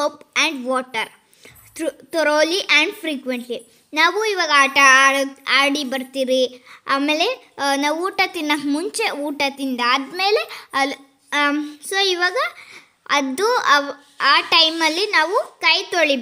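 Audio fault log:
No faults detected.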